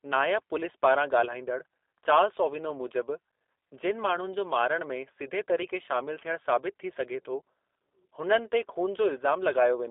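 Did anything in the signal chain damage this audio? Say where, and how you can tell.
Yes. The damage comes from the codec stage and runs through the whole clip: this is G.729 coding. Nothing reaches above 3.6 kHz, and the low end stops near 300 Hz. The speech sounds plainly rough and synthetic, which fits an 8 kbit/s model-based codec that rebuilds each frame from a filter and a few pulses.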